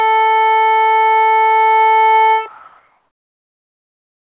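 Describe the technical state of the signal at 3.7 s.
At 3.7 s the signal sits inside a stretch of comfort noise in place of the background, running from 2.48 s to the end of the clip at about 4.33 s. The likely cause is discontinuous transmission: the sender's activity detector judged the quiet passage of the music as silence and stopped sending, so the receiver filled about 1.86 s with synthetic noise. The real background gives way to a flat, featureless hiss at nearly the same level, only about 1 dB lower, still limited to 4 kHz by the call codec.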